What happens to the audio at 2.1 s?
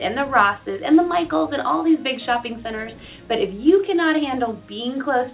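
Nothing goes wrong at 2.1 s: the audio is intact there, carried through the call path with the narrow band, nothing above 4 kHz, of a G.711 mu-law connection.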